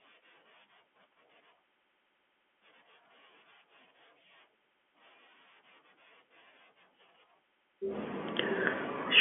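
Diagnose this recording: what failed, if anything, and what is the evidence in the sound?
Nothing in the chain has failed: the speech comes through an ordinary telephone path with G.711 mu-law coding at 64 kbps, its band held to 200 Hz to 3.4 kHz as a normal line delivers it.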